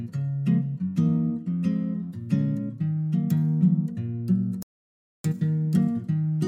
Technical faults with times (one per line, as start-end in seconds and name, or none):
4.62-5.24 playback stall